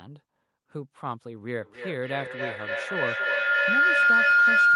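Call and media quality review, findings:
Feedback howl, 1.61 s to end of clip. Tone near 1.5 kHz, pulsing roughly every 300 ms, peaks about 13 dB above speech. Probable cause: two endpoints in one room on the same call. The mic-to-speaker loop gains on each pass, narrowing to its favoured band. Unbroken; mute one device.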